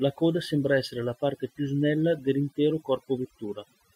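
A noise reduction stage was pushed far too hard on a recording with a noisy background, so the clip of speech suffers from overdone noise removal for its whole length. Any frequency band sitting close to the tool's noise estimate gets pulled down or shut off, and the softer parts of the voice are caught along with the noise. What remains between phrases is near silence dotted with twinkling specks.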